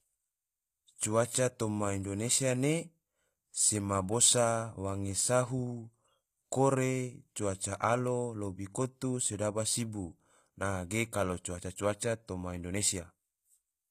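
HE-AAC compression runs throughout. It likely rebuilds the upper speech spectrum from copied lower bands, which fits about 24 kbps. Sibilants sound gritty and metallic, with nothing above 14.9 kHz.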